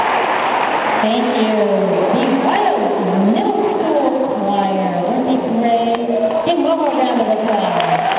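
Nothing here goes wrong: the sound comes over a call link whose narrow band, with nothing above 4 kHz, fits G.711 mu-law, and it stays steady the whole way with no dropouts, glitches or other trouble to point at.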